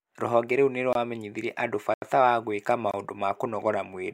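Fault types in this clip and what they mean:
Block of digital silence: the output drops straight to silence and comes back with no fade. That usually means the buffer wasn't filled in time. Here there are three. Short ones at 0.93 to 0.95 s and 2.91 to 2.94 s (about 23 ms, which fits a 1024-sample buffer) are brief gaps, and the longer 80 ms hole at 1.94 to 2.02 s, just before "wa gwĩka", is a longer dropout.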